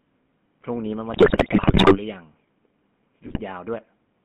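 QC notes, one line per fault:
Throughout: GSM full-rate codec. The speech was squeezed through the original GSM coder, which fits its 13 kbps full-rate mode. It rebuilds the voice from a vocal-tract model fed by sparse regular pulses and passes only about 150 Hz to 3.4 kHz, so speech sounds plainly buzzy, gravelly and narrow.
1.14–1.98 s and 3.26–3.41 s: GSM bit errors. Corrupted bits reached the decoder, at a rate that points to roughly 8 and 7 percent. Damaged filter, pitch and gain values warp the spectrum and jolt the level frame by frame, breaking the speech into squawks, pops and gargling.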